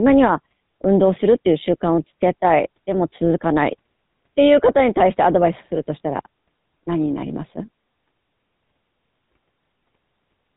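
From start to finish the speech carries GSM full-rate codec damage, plainly audible throughout. The codec rebuilds the voice from a vocal-tract model driven by a sparse, regularly spaced pulse train, and that coarse excitation gives a buzzy, gravelly roughness, which fits the 13 kbps full-rate scheme. Nothing survives above 3.8 kHz. A simple low-pass filter would only dull the sound, while this roughness sits inside the remaining band itself.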